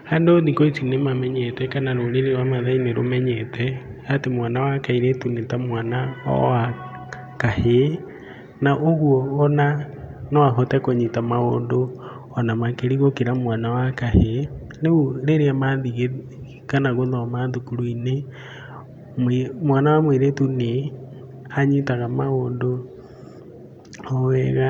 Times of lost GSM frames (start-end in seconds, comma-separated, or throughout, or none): none